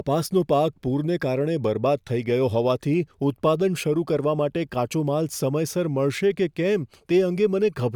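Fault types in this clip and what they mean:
No fault types are present in this clip.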